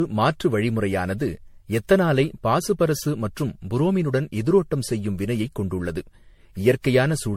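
Speech, likely passed through MP3 encoding about ten times at around 64 kbit/s, causing generation loss throughout: swirly, hollow smearing, blurred attacks, and nothing above 16.5 kHz.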